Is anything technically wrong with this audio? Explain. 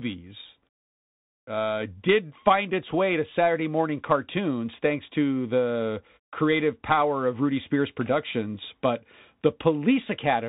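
Yes, the whole clip has gone through a Bluetooth CVSD headset codec, fitting a 64 kbps link. It codes one up-or-down bit per sample with an adapting step, and as a narrowband codec it passes nothing above 4 kHz, so the speech sounds muffled, s sounds come out scratchy, and a grainy hiss runs underneath.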